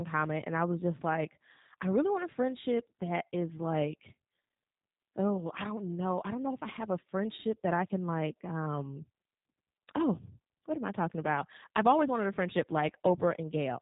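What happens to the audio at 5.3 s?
At 5.3 s the speech sounds thin, slightly rough and synthetic, with nothing above about 3.8 kHz, as it does across the whole clip. That is G.729 codec damage: each frame is rebuilt from a vocal-tract filter, pitch predictor and few pulses, which fits an 8 kbit/s G.729A stream.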